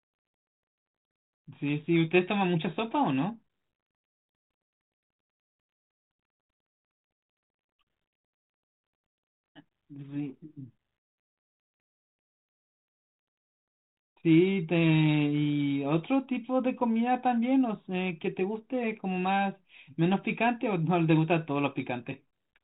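No technical faults are audible.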